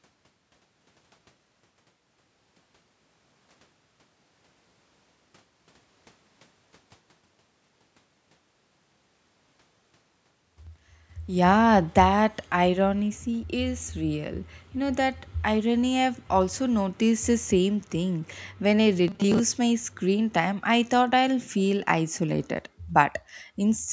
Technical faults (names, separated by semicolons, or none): automatic gain falling; robotic sound from repeated short buffers